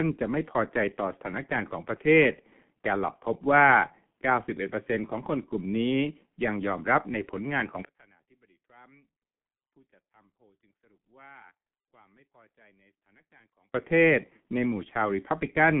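G.723.1 codec damage runs through the whole speech clip. Nothing reaches above 3.7 kHz, and the band sits near 150 Hz to 3.4 kHz. The coarse, slowly updated voice model, consistent with roughly 6 kbit/s, leaves speech muffled and hoarse, with smeared consonants.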